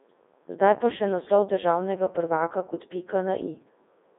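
From start to finish the speech runs through a Codec 2 vocoder, and it shows: robotic, buzzy voicing rebuilt from sine waves, heavy codec damage, a narrow 250 Hz to 3.7 kHz band with nothing above 3.8 kHz. That sounds like the top 3.2 kbit/s mode.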